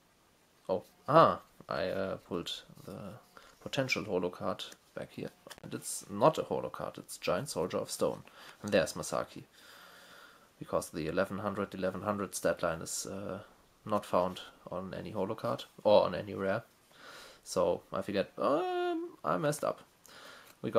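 At 5.53 s an intermittent contact interrupts the signal through 5.67 s. A loose plug or cable conductor briefly loses connection, opening the line for about 65 ms. The sound drops out abruptly, with crackle at each edge and faint hiss during the gap.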